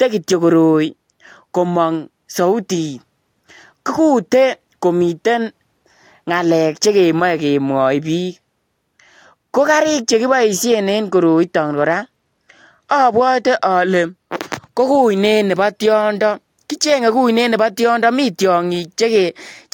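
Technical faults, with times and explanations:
11.09 to 14.14 s, Bluetooth SBC bit pool drop: the wireless link came under strain and the sending device cut the SBC bit pool, roughly halving the bits per frame, which points to a fall from a bit pool near 28 to one near 14, around 108 kbps. With so few bits, the highest sub-bands are starved and the lower ones coarsely quantised, so the speech turns dull and gritty for those three seconds before the full rate returns.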